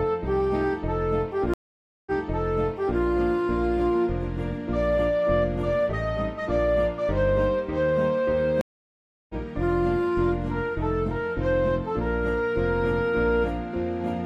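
At 1.54 s the audio stops for 527 ms, then comes back 929 ms earlier than where it left off, so a stretch already heard plays again. This is a stream reconnect: the connection dropped, and the player fell silent, reconnected and started a new decoder partway into a stream that the server refilled with a resent burst. The event runs to 2.99 s.

At 8.61 s a second reconnect brings 682 ms of silence, and the sound resumes roughly 0.7 s further on, skipping ahead as a live stream does. That event ends at 9.34 s.

In both cases the opening frame after the gap fades in. A plain dropout is different: the sound picks up exactly where it stopped, with no repeated or missing material.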